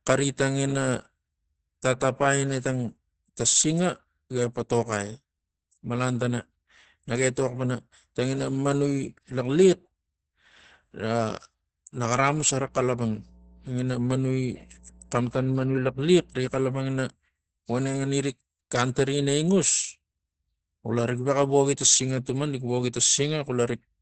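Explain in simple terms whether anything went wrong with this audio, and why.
The speech sounds muffled and a bit hoarse all the way through, with nothing above about 8.8 kHz, likely from heavy Opus compression squeezing it into a low-quality speech mode. From 12.55 to 16.62 s there's mains hum, a faint steady 60 Hz buzz from the power line leaking in.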